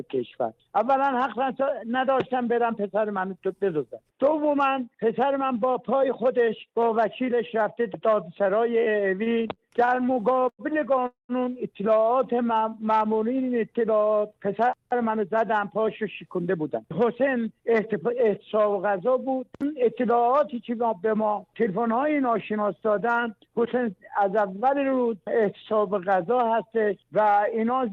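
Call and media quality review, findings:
Repeated stalls (stutter), 9.23–10.62 s: sound drags and catches about 14 times, holds up to 98 ms, 312 ms filled in total, nothing lost. Jitter buffer repeatedly ran dry on late or slow packets; receiver extended the last sound each time.

Call audio freeze, 11.07–11.32 s: sound holds as a fading buzz or hiss, then about 140 ms of silence, 223 ms inserted, resumes where it stopped. Likely packets delayed in transit, emptying the jitter buffer.

Jitter buffer slow-down, 12.27–12.86 s: sound drawn out, pace at 91%, pitch unchanged, 61 ms added. Low buffer; receiver repeated single pitch periods back to back to rebuild its reserve.

Jitter buffer speed-up, 14.76–17.33 s at 108% (about 200 ms cut), 22.24–22.58 s at 108% (about 40 ms), 27.48 s to end at 110% (about 50 ms): hurried sound, same pitch. Buffer over target; receiver trimmed short pitch-period pieces.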